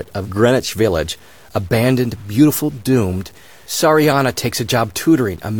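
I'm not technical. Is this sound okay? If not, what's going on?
No, there's a grainy, gritty edge running through the whole clip that gets worse as the sound gets quieter. It's low bit depth without dither: the audio was likely cut down to about 8 bits and chopped off roughly, so soft parts turn gritty.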